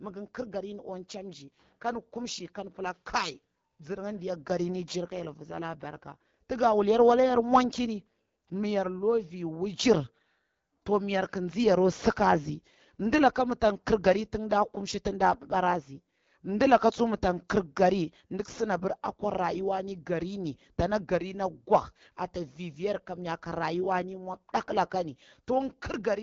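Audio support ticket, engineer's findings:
AMR wideband (HD Voice) codec, entire clip. Speech rough and raspy throughout, plainly audible codec damage; nothing above 7.4 kHz. Low-rate vocal-tract modelling with pulse excitation, band above 6.4 kHz noise-filled. Roughness fits the 8.85 kbit/s mode.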